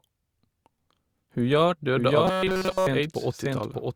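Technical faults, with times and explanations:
1.96 s to end: doubled audio track. From this point a second full-band copy of the speech runs underneath the first, about 5 dB quieter and trailing by roughly 0.7 s. It carries no decay or added room colour, and it enters abruptly rather than building up. This is likely the same signal reaching the mix twice, through a slower second capture path or an edit that left two misaligned copies.
2.25–2.87 s: robotic sound from repeated short buffers. For about 0.6 s the speech turns into a rigid, metallic buzz that still loosely follows the syllable shapes, with essentially none of the real audio getting through. The buzz sits at a fixed 188 Hz, which fits one block of about 5.3 ms being replayed over and over. The likely cause is audio arriving too seldom, so the software fills each gap by repeating the last short buffer while the incoming material is skipped.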